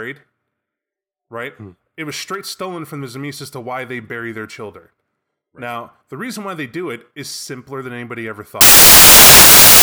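From 8.61 s to the end, the speech turns into loud, harsh broadband noise, close to white on the louder passages. These are samples built from the wrong bytes: misaligned or swapped bytes promote the rapidly changing low bits into each value's dominant part.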